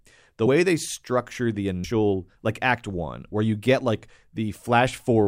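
Whole compressed frames were skipped twice in this speech clip, either missing or rejected by the decoder. At 0.46 s, just before "they structure the", about 70 ms vanishes; at 1.84 s, after "they structure the", roughly 200 ms, consistent with 32 ms frames. At each point the audio jumps ahead by the length of the missing frames.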